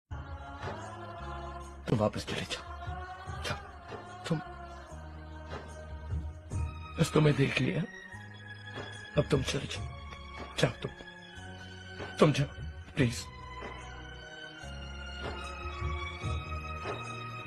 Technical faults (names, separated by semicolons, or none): none